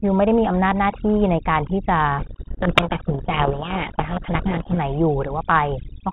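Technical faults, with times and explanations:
Throughout, overdone noise removal: the background sinks to near silence dotted with twinkling specks, because an over-strong noise reducer cuts individual frequency bands whenever they sit near its noise estimate, taking the quieter parts of the speech with them.
2.18 to 4.79 s, codec payload misread: the speech is buried under harsh, gritty distortion for about 2.6 seconds, because the decoder reads the G.726 code words with their bits in the wrong order, so each sample difference comes out wrong until both ends agree again.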